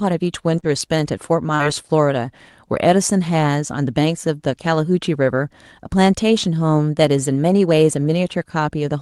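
Speech from a call, with two cases of short concealed packet loss. The first runs from about 0.59 to 0.66 s. The second runs from about 1.55 to 1.62 s. Each time, roughly 40 ms of audio failed to arrive in time. The receiver filled each gap by carrying the preceding sound forward, then crossfaded back. Both spots are heard as a brief smear or wobble, and a short consonant may be lost. The call codec's band tops out near 12 kHz.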